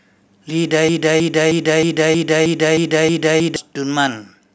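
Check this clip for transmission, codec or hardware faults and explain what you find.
One fault: a broken-record loop from 0.89 s to 3.56 s. A 0.31 s fragment of speech repeats exactly nine times, likely from a stalled player or stream resending its last buffer, so that stretch of speech is lost.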